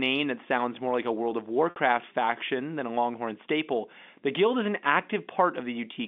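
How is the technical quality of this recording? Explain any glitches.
The recording has one glitch, heard over the telephone-band sound of G.711 coding. Between 1.70 and 1.76 s, just before "faction than a", there is packet loss with pitch repetition. About 60 ms of audio went missing, which fits three lost 20 ms packets. The receiver filled the gap by looping the last pitch period and fading it, so the gap sounds like a brief held, buzzy tone rather than the clean hole of a plain dropout.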